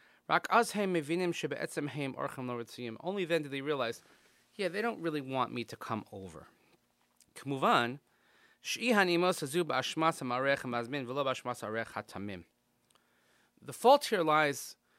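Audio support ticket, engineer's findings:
Listened through the full speech clip and nothing stood out as a problem.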